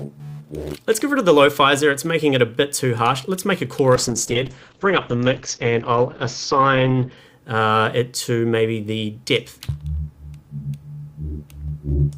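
A call bitrate drop runs from 3.96 s to 7.23 s. The bandwidth estimate fell, and the encoder had to code with far fewer bits. What you hear fits a fall from around 96 kbps to about 8 kbps, held at its lowest for about 3.2 s. The coarser coding makes the audio rough and watery, and the top end is cut from 20 kHz to 6 kHz, which muffles it until the bitrate recovers.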